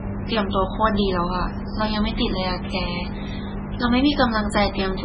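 Speech with heavy MP3 compression damage throughout, likely from an encoder starved of bits, which fits about 16 kbps. The treble stops dead at 10.2 kHz, and weak frequency lines flicker on and off, sounding watery and swirly. A spectrogram shows a hard ceiling there, with patchy holes beneath.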